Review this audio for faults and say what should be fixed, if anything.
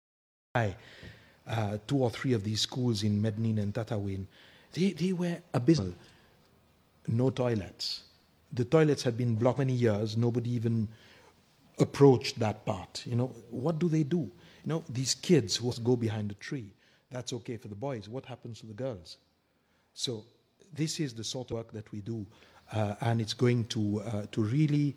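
The opening is a cut-off start: the audio comes out of digital silence already mid-sound at 0.55 s, with no attack or fade, because capture began after the sound was under way. Start recording earlier, with a short pre-roll before anything plays.

Four compressed frames skipped occur, at 5.74 s, 9.54 s, 15.68 s and 21.48 s. At each one the sound lurches forward, by roughly 150 ms at the first and last and by roughly 400 ms and 500 ms at the middle two. Whole compressed frames were missing or rejected as damaged by the decoder. Each frame is 42.7 ms long, and roughly 3 to 10 frames went missing per jump. Fix the file's integrity or the transport so that every frame reaches the decoder intact.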